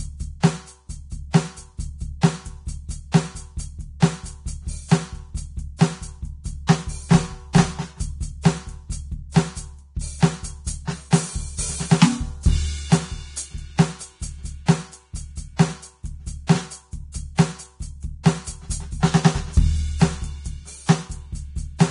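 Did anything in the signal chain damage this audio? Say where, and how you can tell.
Yes. Vorbis compression damage runs through the whole music clip, likely introduced at the codec stage. Nothing survives above 10.6 kHz, and the remaining treble turns hissy and grainy, with roughened tones and smeared attacks. That heavy quantisation fits a low bitrate around 32 kbps.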